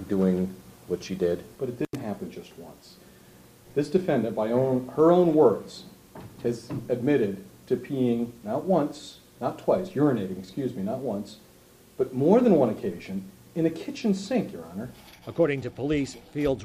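An intermittent contact, a loose plug or cable briefly opening, breaks the signal path from 1.85 to 1.95 s, cutting the audio out for about 65 ms with crackle at each edge.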